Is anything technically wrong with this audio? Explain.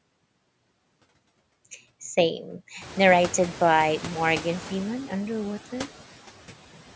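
Yes. Noise suppressor artifacts are present for the whole speech clip. The suppressor treats steady background noise as something to remove and pulls down each frequency band it judges to be noise, frame by frame, here by about 11 dB. The gain shifts as speech starts and stops, so the leftover noise sinks in pauses and swells under the voice. This is more exposed once the room noise rises by about 19 dB at roughly 3 s. On a spectrogram the noise floor shows as patchy speckles blinking on and off between words rather than a smooth band. The waveform's quiet gaps visibly breathe in and out. The call microphone processing leaves nothing above 8 kHz, seen as a clean ceiling on the spectrogram.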